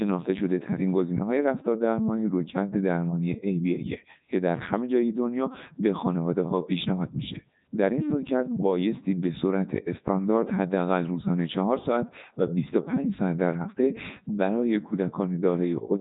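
The whole clip has gone through a Codec 2 vocoder, and it's heavily damaged. Only pitch, voicing, energy and a rough spectral envelope survive, so the speech comes back rebuilt from sine waves, robotic and buzzy, with nothing above 3.8 kHz. That fits the 3.2 kbit/s mode.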